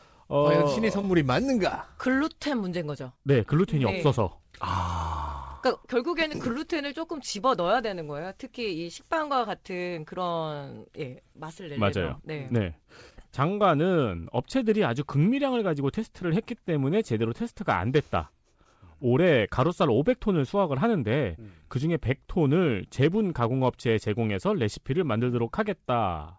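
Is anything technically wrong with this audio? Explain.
No, nothing is technically wrong with this speech.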